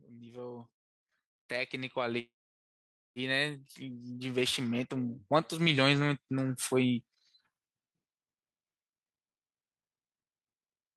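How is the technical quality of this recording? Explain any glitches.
The recording has two clear technical problems, both in the first seven seconds of this speech clip.

From 1.49 s to 6.69 s, automatic gain rising lifts the level by about 13 dB. The gain control judged the input too quiet and turned it up slowly, so voice and background noise swell together. That joint, gradual climb marks it as gain riding rather than the talker getting louder.

From 2.19 s to 3.19 s there is a call audio freeze. The last sound is stretched into a brief fading buzz or hiss, then almost a second of near silence, likely because delayed packets left the jitter buffer empty. Speech then resumes exactly where it stopped, with nothing lost, which distinguishes it from a dropout that cuts material.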